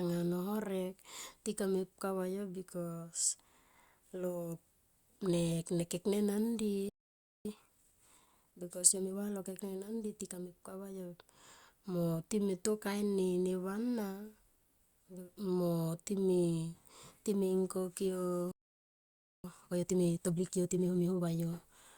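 At 6.89 s the speech stops dead for about 0.56 s, until 7.45 s. This playback stall is most likely the player running out of buffered data or its thread being held up. Unlike a dropout, which deletes a stretch of audio, this is a silent gap in the output, after which the speech carries on. The second stall is longer, about 0.92 s, from 18.51 to 19.44 s, right after "time himkokyo", and again probably comes from the output starving.

Each stall is followed by time-compressed catch-up, as the player trims the backlog it built up while silent. From 7.45 to 10.45 s the speech runs at 1.1 times normal speed. That is a mild hurry. From 19.44 to 21.28 s it runs at 1.5 times speed, clearly rushed. A simple speed-up would raise the pitch along with the tempo, but here the pitch stays natural. That is because small slices are cut out and cross-faded together.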